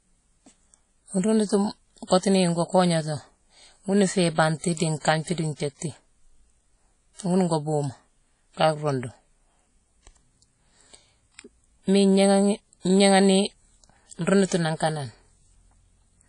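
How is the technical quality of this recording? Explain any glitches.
The quality is poor. Plainly audible codec damage runs through the whole speech clip. It is likely WMA compression at a low bitrate, consistent with about 32 kbps. Nothing survives above 10.1 kHz. Long transform blocks smear quantisation noise across tens of milliseconds. The result sounds washy and ringing, with hiss that breathes with the speech.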